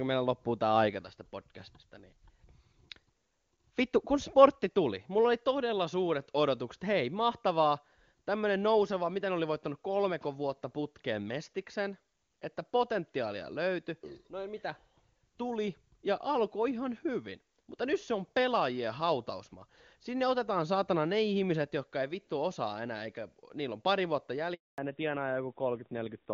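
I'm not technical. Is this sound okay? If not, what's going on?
No, not quite. There are two problems, both right near the end.

The first is a handover gap. Just after "niillä on pari vuotta", at about 24.54 s, the voice cuts out and there's a quarter-second of silence until 24.78 s. That's the phone switching the call from one network to another. While it swaps over, no pieces of speech get through, so whatever was said in that moment is simply gone.

The second is a fallback to narrowband. Up to that point the call is running in HD Voice, which sounds full and clear. Once the switch finishes, from 24.78 s to the end, the call has dropped to an older, lower-quality phone format. Everything above 4 kHz disappears, so the voice sounds muffled and a bit rough, more like an old landline than a modern call.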